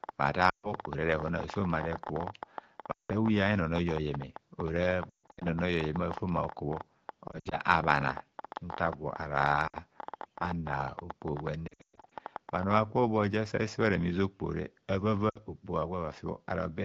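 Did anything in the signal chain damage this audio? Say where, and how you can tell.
Yes. Lost AMR speech frames occur at 0.49–0.73, 2.91–3.11, 5.10–5.46, 7.27–7.56, 9.67–9.77, 11.67–12.12 and 15.29–15.37 s, a radio-network fault. Failed frames made the AMR-WB decoder reuse its last good settings at falling gain, so speech smears, fades, then returns rough.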